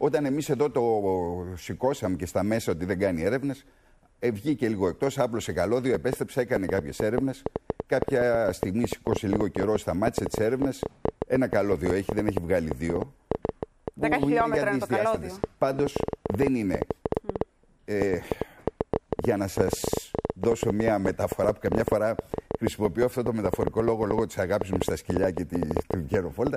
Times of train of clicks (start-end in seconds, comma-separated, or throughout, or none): 5.95-26.48